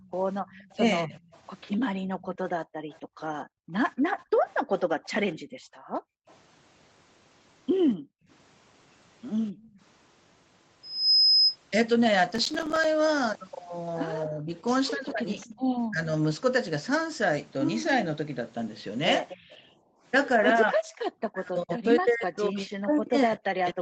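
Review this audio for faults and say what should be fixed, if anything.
Echo leak sits under the speech from 0.00 to 6.35 s, again from 15.40 to 15.49 s, and from 19.29 to 19.58 s. A copy of the speech returns 250 ms late. It is faint at first and noticeably stronger at 19.29 s. The likely cause is a far-end loudspeaker whose echo canceller did not fully remove its own playback before sending it back. Fix: tune or retrain the remote echo canceller, and lower its loudspeaker volume.

Speech suppressed in double talk hits three stretches. From 0.77 to 1.19 s the speech dips mildly, about a fifth of a second in all. From 14.26 to 16.11 s it drops further, roughly 15 dB, for around 0.7 s. From 20.72 s to the end it nearly vanishes. Each time, the canceller apparently could not separate the talker from the echo during overlap, so it turned everything down. Fix: use a canceller with better double-talk detection.

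Background gated by the echo canceller appears from 1.98 to 9.80 s. The room sound drops by about 40 dB at its deepest, for about three seconds in total. It happens again from 19.37 to 20.03 s, about 20 dB down, for about half a second. The canceller clamped the microphone while the loudspeaker played. It released when playback stopped. Fix: use gentler suppression or add comfort noise so the background stays steady.

Processor overload crackle tears through the sound from 12.31 to 12.84 s. The processor missed around twenty deadlines over that stretch. Each miss left a tiny silent hole with hard edges. The length of each hole fits a buffer of about 5 ms. Together the holes form a gritty burst that stops once the load eases. Fix: free up processor time or use larger buffers on the capture side.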